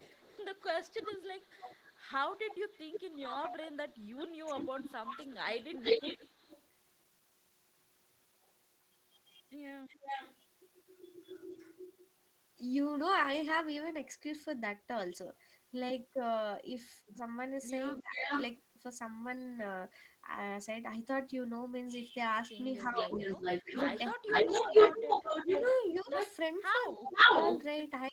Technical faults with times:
0.00-6.62 echo leak
3.09-4.85 speech suppressed in double talk
9.88-11.86 echo leak
17.07-17.16 echo leak
17.98-18.31 speech suppressed in double talk
18.22-18.44 echo leak
22.85-28.12 echo leak
22.87-28.12 speech suppressed in double talk

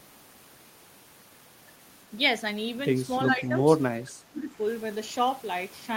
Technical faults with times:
3.26-3.57 speech suppressed in double talk
3.30-3.35 echo leak
4.02-4.57 speech suppressed in double talk

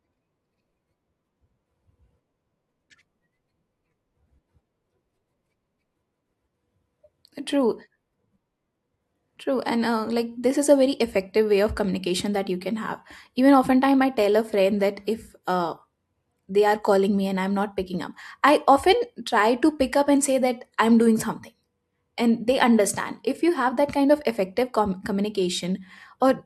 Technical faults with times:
none

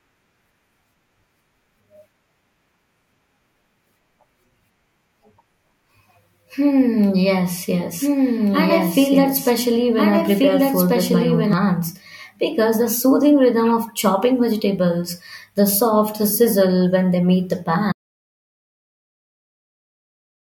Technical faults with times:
8.01-11.53 doubled audio track
17.92-20.52 audio dropout to silence

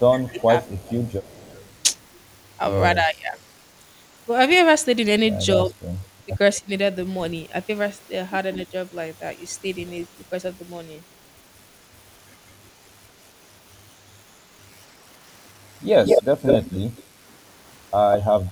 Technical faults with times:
0.13-0.90 speech suppressed in double talk
0.28-1.84 echo leak
2.95-3.37 speech suppressed in double talk
5.65-5.77 speech suppressed in double talk
6.25-6.69 speech suppressed in double talk
16.03-17.03 echo leak
18.12-18.52 echo leak

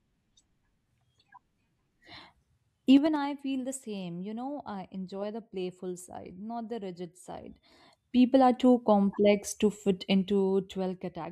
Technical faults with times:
2.88-3.25 zipper noise
7.34-7.80 zipper noise
10.03-11.24 zipper noise

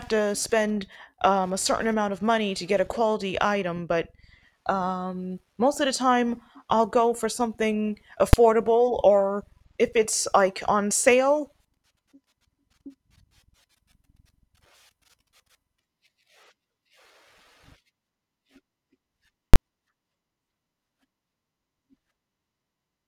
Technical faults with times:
8.33 invalid numbers at full scale
19.54-19.56 invalid numbers at full scale

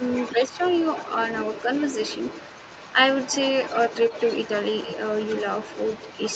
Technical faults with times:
0.00-6.35 other side's voice leaking through
0.32-0.60 speech suppressed in double talk

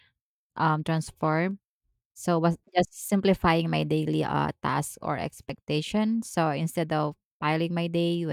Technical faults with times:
1.51 overlap between stream segments
5.49 overlap between stream segments

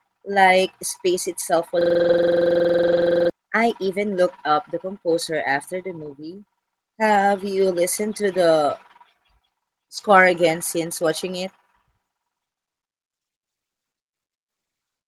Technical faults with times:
1.81-3.30 system hang loop
1.99-2.13 lost packet rebuilt from error correction
2.87-3.01 lost packet rebuilt from error correction
3.85-3.87 lost packet rebuilt from error correction
6.01-6.11 lost packet rebuilt from error correction
7.11-7.21 lost packet rebuilt from error correction
8.35 lost packet rebuilt from error correction
9.97 lost packet rebuilt from error correction

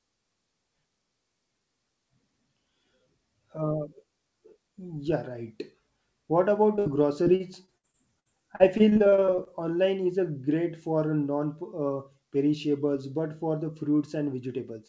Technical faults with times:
6.76-6.79 short concealed packet loss
6.79-6.87 burst of packet loss
7.23-9.48 repeated packet loss (robotic sound)

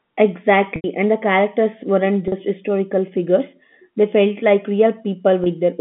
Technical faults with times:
0.76-0.84 packet loss with pitch repetition
2.28-2.32 packet loss with pitch repetition
5.44-5.46 packet loss with pitch repetition

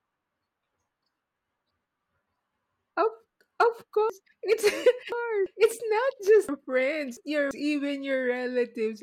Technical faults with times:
1.02-1.71 chunks out of order
4.10-5.46 chunks out of order
6.49-7.51 chunks out of order

